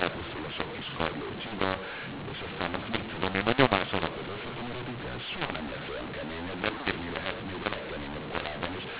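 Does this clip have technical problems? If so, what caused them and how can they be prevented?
Yes. Throughout, the speech is harsh and distorted, with noise filling the pauses. This is mu-law and A-law mixed up: mu-law G.711 samples decoded as A-law scramble the levels. Prevent it by matching the decoder's law to the encoder's.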